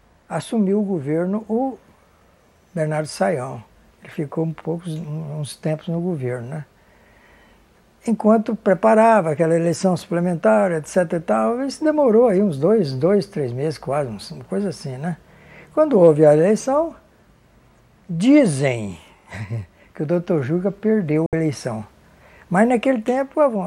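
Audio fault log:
21.26 to 21.33 s, digital broadcast dropout: the audio fades out in about 3 ms and goes silent for roughly 64 ms, which fits two lost frames the receiver muted. On a waveform it is a flat gap; on a spectrogram, a clean vertical blank band.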